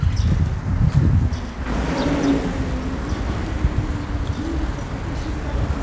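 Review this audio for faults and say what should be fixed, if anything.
A stretch of roughly a second was dropped while later audio was already queued, so at 1.66 s a skip ahead occurs: playback jumps forward with no filler and the two sides are spliced almost directly, leaving an abrupt discontinuity. Sizing the jitter buffer to absorb bursts, rather than discarding overflow wholesale, would prevent this.

The jitter buffer held more audio than its target, so between 3.51 and 5.51 s it trimmed short pitch-period pieces repeatedly, removing about a tenth of a second. This jitter buffer speed-up makes the sound run at 105% speed with pitch unchanged, slightly hurried. Spreading delay reduction more gently, or limiting how far the buffer can grow, would avoid the audible rush.

The G.722 call path, which cuts everything above 8 kHz, is not a fault.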